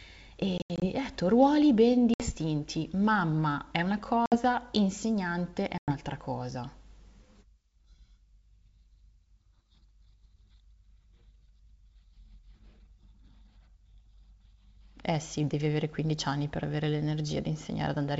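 Speech over wideband G.722 suffers packet loss on an ADPCM call at 0.58–0.85 s (about 140 ms scattered), 2.14–2.31 s, 4.26–4.36 s and 5.78–5.92 s: hard silent holes, then a slightly distorted return as the decoder's predictor resynchronises, unlike clean dropouts.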